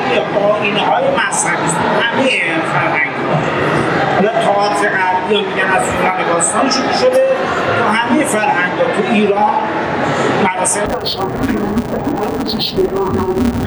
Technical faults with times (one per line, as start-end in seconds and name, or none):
10.86-13.66 interleaved audio read as planar